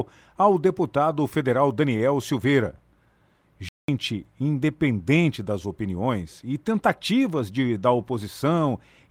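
At 1.97 to 2.01 s there is a short stall from a late packet. The receiver's jitter buffer ran dry, so about 19 ms of the preceding sound was stretched to cover the gap, and playback resumed at the same point once the packet arrived. The result is a brief hold with a faint buzz or dip, nothing lost, and roughly 19 ms of added delay from then on.

At 3.69 s the audio stops outright for about 198 ms, then carries on. This is a playback stall, likely caused by the player running short of data or its output thread being blocked, leaving an abrupt gap of silence in the middle of the speech.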